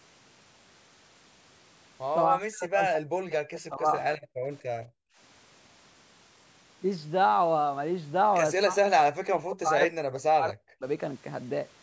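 From 2.3 to 3.95 s the echo canceller likely confused the talker with loudspeaker echo while both sides spoke. This speech suppressed in double talk cuts the talker deeply, in broken pieces totalling about a second and a half. Background gated by the echo canceller follows at 4.23 to 4.43 s and 4.66 to 5.17 s, where the canceller clamps the microphone during loudspeaker playback and the room sound drops by about 40 dB before returning. From 8.6 to 10.84 s double talk likely again suppresses the speech, deeply and in fragments totalling roughly two seconds.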